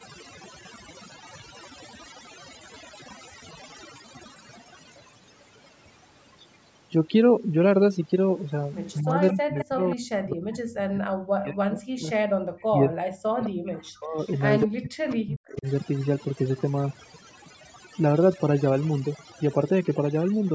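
Throughout the recording the speech carries the marks of overdone noise removal. The background has been pushed to near silence and is dotted with twinkling specks. This comes from a noise reducer set too aggressively: individual frequency bands that sit close to its noise estimate are pulled far down or switched off, and the quieter parts of the speech are removed along with them.

From 8.93 to 9.96 s a delayed copy of the speech is heard, trailing the original by 207 ms and sitting about 15 dB below it. This is an echo leak, most likely from a speakerphone on one side whose echo canceller failed to remove everything its microphone picked up and sent the remainder back. Shorter scraps with the same 207 ms delay follow at 12.59 to 12.65 s and 14.18 to 14.39 s, both much fainter at about 35 dB down. Another, at about 15 dB down, falls at 13.43 to 13.50 s.

Overlapping these, the main speech is repeatedly turned down, dipping by as much as about 40 dB. 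This happens from 8.99 to 12.09 s, from 12.66 to 14.19 s and from 14.64 to 15.66 s. That pattern fits speech suppressed in double talk. It is likely that both sides were talking at once, and the echo canceller, unable to separate the local talker from the loudspeaker echo, attenuated both. The call's microphone processing is also audible in the band limit, with nothing above 8 kHz.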